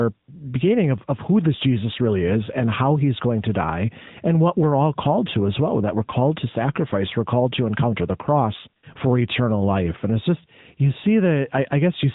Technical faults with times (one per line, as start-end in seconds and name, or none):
0.00-12.14 AMR narrowband mobile codec